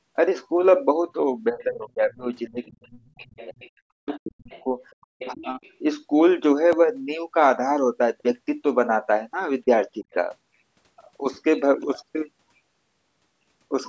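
From 1.51 to 3.54 s the speech is suppressed in double talk. It dips by up to roughly 30 dB. The likely cause is an echo canceller that confused the talker with the loudspeaker echo. It happens again at 4.04 to 4.65 s, 5.17 to 5.41 s and 10.02 to 10.06 s.

The other side's voice leaks through at 2.64 to 3.70 s, 4.09 to 4.63 s and 5.20 to 5.74 s. It sits roughly 20 to 25 dB below the speech, faint. Likely the canceller left some loudspeaker sound in the microphone signal.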